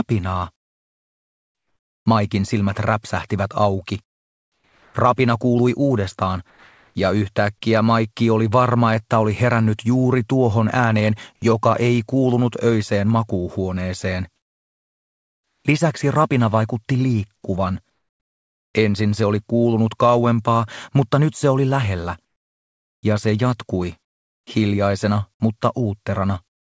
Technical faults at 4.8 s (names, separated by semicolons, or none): comfort noise in place of the background